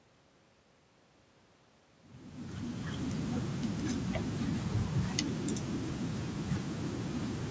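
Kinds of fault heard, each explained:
Nothing here counts as a fault: the speech just eases in with a gentle fade that's fully up by about 3.3 s, and the top end stops around 8 kHz the way call audio normally does.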